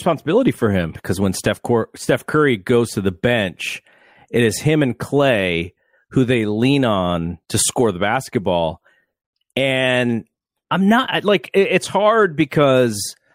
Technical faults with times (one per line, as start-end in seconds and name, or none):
none